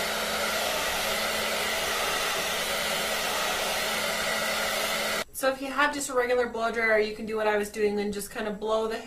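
From 1.27 s onward codec artefacts suddenly rise with no gap, the mark of an adaptive stream at a lower bitrate, consistent with Opus falling to 24 kbit/s.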